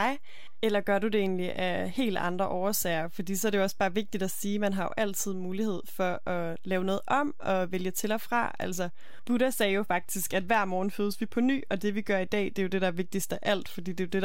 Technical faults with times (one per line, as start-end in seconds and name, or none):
0.00-14.25 DC offset